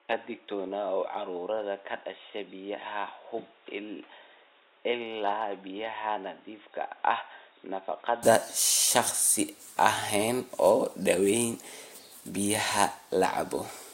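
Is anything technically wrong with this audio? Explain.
Yes. From the start to 8.23 s the speech is band-limited, with nothing above 3.8 kHz, so it sounds dull and boxy. It is also a few decibels quieter and carries its own faint background noise. At 8.23 s the sound opens up abruptly with no gap, most likely because the input had been on a poorer device and switched away from it partway through the recording. A simple filter would only cut the top end, but here the level and noise floor change together with the bandwidth.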